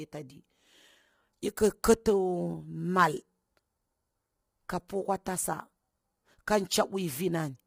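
From start to finish the speech has a rough, grainy edge, with a hiss filling the gaps between the harmonics and a top band that sounds thin and a bit synthetic. That's likely low-delay AAC compression, the AAC-ELD sort used on video calls. Its short frames can't separate pitch harmonics cleanly, and the heavy damage here points to a low bitrate of around 24 kbps, so the codec runs short of bits and the voice gets smeared.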